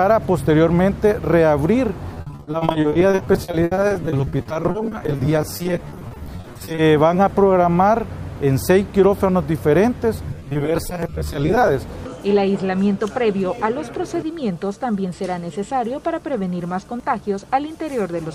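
From 2.14 to 6.79 s, repeated packet loss sets in. Packets keep failing to arrive in time, around a hundred holes in this stretch, the longest 70 ms. Each hole is bridged by stretching the sound that came just before it, so about 38% of the span is patched rather than real. The audio turns choppy and robotic, with a stuttering texture and fragments missing.

At 5.05 s, inside that stretch, there is a brief skip with the audio missing between chunks. The likely cause is a recorder working in 6-second blocks that drops a few tens of milliseconds at each handover, and the two edges butt together with no silence between them. It comes across as a small jump in the flow rather than a pause.

The packet loss returns from 10.27 to 11.69 s with shorter holes, none longer than 20 ms, but more frequent, with about 37% of the span concealed. The sound again has a grainy, robotic flutter.

At 11.03 s, six seconds after the first skip, the same jump from audio missing between chunks recurs. 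It falls inside the second stretch of loss.

At 17.0 s it occurs once more, again six seconds on, as a short seamless skip.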